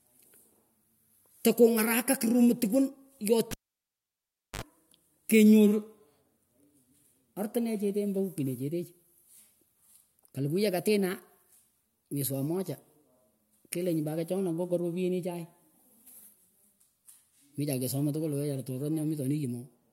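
Cable pulled and plugged in, 3.51 to 4.62 s: the lead comes out with a pop, leaving 1.06 s of near silence, then a 58 ms burst of 50 Hz mains buzz while only the tip touches, and a second pop as speech returns.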